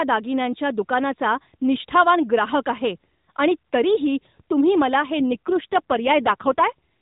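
From 5.20 to 6.64 s, just after "तरीही तुम्ही मला हे", the speech turns rougher and more buzzy and synthetic, with no gap and no change in bandwidth. This is an AMR rate drop: the narrowband mobile codec fell from 12.2 to 5.9 kbps, leaving fewer bits to model the voice.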